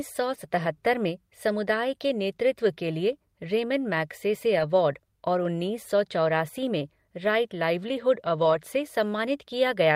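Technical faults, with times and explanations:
0.35–0.37 s, 4.55–4.61 s and 8.37–8.55 s: lost packet rebuilt from error correction. There's no gap, just brief rough, grainy patches of 20, 40 and 100 ms where the decoder played the lower-quality backup copies carried in the following packets. The first comes just before "में समुदाय के नेतृत्व", and the last just after "में राइट लाइवलीहुड".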